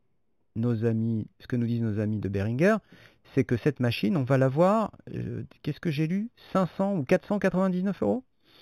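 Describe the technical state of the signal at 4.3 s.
Imaging from linear upsampling is present at 4.3 s and throughout. Straight-line interpolation, pointing to a low original rate, leaves mirror images at 4 to 8 kHz, about 30 dB down, adding faint metallic shimmer on sibilants.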